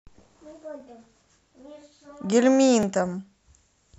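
At 0.80, 1.82 and 2.83 s, overlapping chunks repeat about 13 ms of speech at each one-second join, causing regular clicks, visible as vertical spectrogram stripes and waveform discontinuities.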